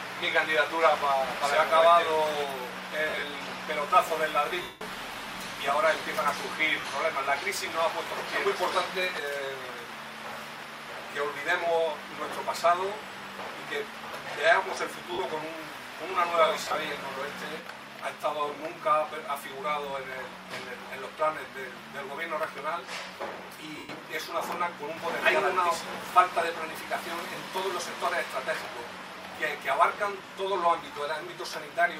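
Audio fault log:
3.09–3.23 s, 4.62–4.81 s, 6.80–6.84 s, 15.13–15.19 s, 16.65–16.75 s and 23.78–23.89 s: lost LE Audio frames. Over the Bluetooth LE Audio link, the LC3 decoder lost stretches of 40 to 190 ms, consistent with 10 ms frames. The first and fifth gaps are broken into short runs. The decoder filled each gap by replaying the last spectrum with scrambled phase, so tones blur into a brief noisy smear. The 190 ms gap at 4.62 s is long enough for that concealment to fade down toward silence.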